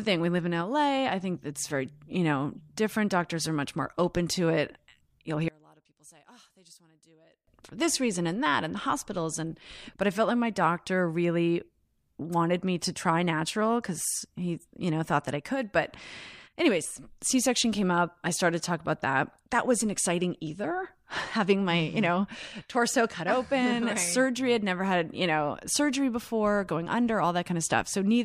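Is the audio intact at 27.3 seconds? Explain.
Yes, at 27.3 seconds the speech plays through cleanly, with no dropout, click, distortion or other fault to be heard at that moment.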